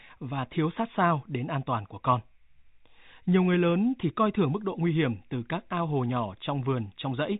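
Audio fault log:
Nothing to enter in the audio fault log: the clip carries no faults.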